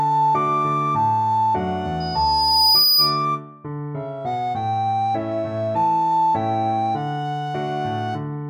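A microphone picking up its own loudspeaker pushes the loop gain above one at 5 kHz, causing loudspeaker feedback squeal from 2.0 to 3.25 s. The tone swells over roughly a second to about 5 dB above the sound.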